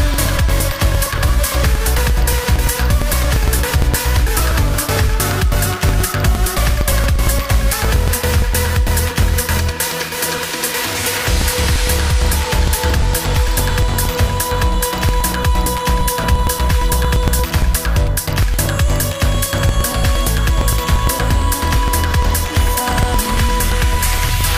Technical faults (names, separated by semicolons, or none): periodic USB or driver dropouts